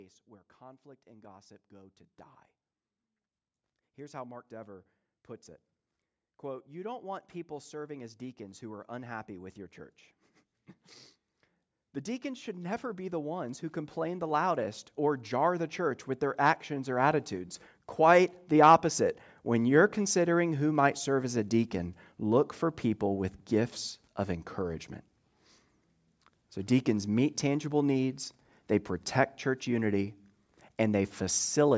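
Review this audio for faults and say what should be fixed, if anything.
Automatic gain rising: the call's gain control judged the input too quiet and ramped its gain up, by about 6 dB from 6.42 to 9.63 s and about 12 dB from 12.22 to 18.89 s, so speech and background swell together. Raising the microphone's input level, or capping how far the gain control may climb, would prevent it.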